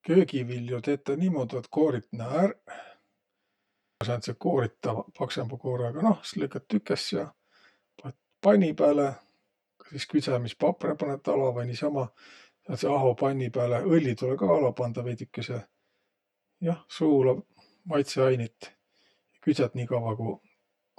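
Speech runs through the whole clip with channel delay (comb filtering): one channel arrives roughly 10 ms behind the other, and when the two are summed to mono, the shared content cancels at evenly spaced frequencies starting near 50 Hz. This gives the voice a hollow, phasey colouring. From 3.58 to 4.01 s, a system hang loop repeats one 85.33 ms piece of audio five times, heard as a stutter at about 11.7 Hz. That fits a 4096-sample buffer cycling while the host was frozen, and roughly 0.4 s of real audio is lost.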